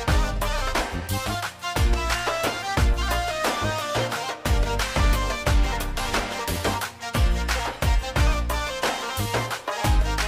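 No audible dropouts, distortion, glitches or level problems turn up anywhere in the recording.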